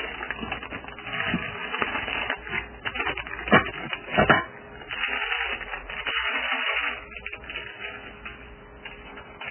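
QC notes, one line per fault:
throughout: MP3 compression, likely starved near 8 kbps; nothing above 3.1 kHz, watery swirl as weak bands flicker; spectrogram: flat ceiling, blotchy holes.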